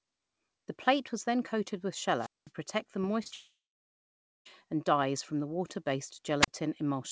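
At 2.17 to 2.51 s, a rise of hiss drops into a hole of near silence lasting about 0.2 s before the speech returns. This is a wireless microphone squelch dropout: the radio signal faded and the receiver's squelch muted the output. The same happens briefly at 6.40 to 6.48 s, with a mute of about 35 ms.

Just after "protect the", at 3.02 to 3.05 s, the sound briefly smears, and two more smears follow back to back at 3.23 to 3.32 s. These are short concealed packet losses: about 20 ms of audio each never arrived, and the receiver filled the gap by extending the last sound.

From 3.34 to 4.47 s, the audio fades into a decaying buzz or hiss and then about 0.86 s of silence. It returns at "and dyes from the" with the missing stretch gone. This is a long network dropout: the receiver ran out of audio, and the likely cause is over a second of lost packets.

Throughout, nothing is present above 8 kHz, which points to a wideband call codec such as G.722.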